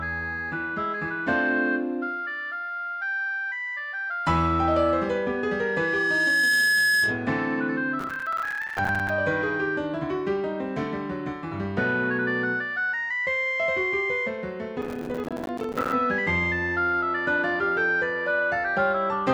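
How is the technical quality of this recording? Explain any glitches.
The recording has two distinct problems: one feedback event and two bursts of dropout crackle.

From 4.79 to 7.37 s there's loudspeaker feedback squeal. The mic hears its own speaker, and a 1.7 kHz tone builds over a second or so until it sits a few dB above the sound.

Processor overload crackle hits at 7.99 to 9.09 s and again at 14.82 to 15.93 s. The processor kept missing buffer deadlines, leaving dozens of tiny silent gaps, which fits buffers of around 5 ms. That's the gritty tearing you hear.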